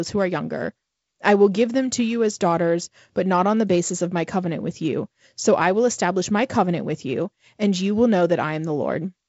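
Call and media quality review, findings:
No faults found in the speech clip.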